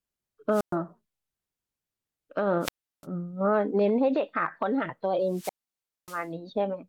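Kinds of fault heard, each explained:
Wireless microphone squelch dropout: radio signal fades until receiver mutes, cutting speech three times, waveform flatlining for about 0.12, 0.35 and 0.59 s, hiss-fringed spectrogram gaps.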